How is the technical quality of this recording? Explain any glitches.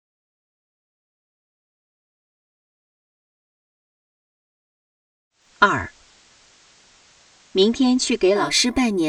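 There's one clear glitch, a digital radio blending to analogue episode. From 5.30 s to about 8.56 s the receiver drops to the FM signal, cross-fading over roughly 267 ms. Hiss rises to around 30 dB under the programme, with no level jump.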